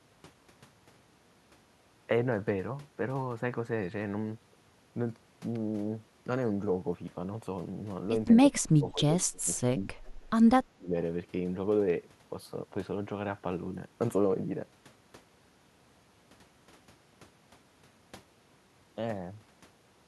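From 8.53 to 9.03 s and again from 9.21 to 9.87 s, the echo canceller likely could not separate this talker from loudspeaker echo during double talk, so it turned both down. The speech dips by up to about 30 dB. At 9.56 to 9.60 s, an echo leak likely let a scrap of uncancelled far-end audio back through, arriving about 0.2 s late. It is very faint, roughly 40 dB below the speech. From 10.72 to 10.94 s, the same double-talk suppression briefly drops the speech by about 30 dB.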